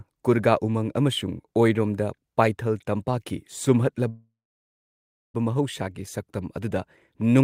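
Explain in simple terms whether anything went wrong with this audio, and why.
A call audio freeze occurs from 4.09 to 5.36 s. The speech stalls into a brief fading buzz or hiss, then about one second of silence, likely because network data arrived late. When it resumed, the speech picked up where it stopped, with nothing lost, only delayed.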